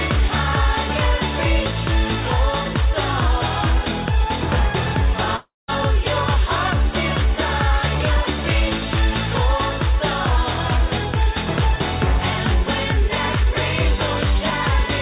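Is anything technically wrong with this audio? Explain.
Yes. From 5.36 to 5.70 s the sound breaks into a buzzing continuation of what came just before, which fades away and ends in about 180 ms of silence before the audio resumes. Roughly 320 ms never arrives, and it is not recovered. This is likely a long network dropout: packets stopped arriving, so the receiver stretched the last received sound to cover the gap, let it decay, then picked up again once new audio came in. The call path's G.711 mu-law coding at 64 kbps keeps nothing above 4 kHz, so the whole clip sounds band-limited in the usual telephone way.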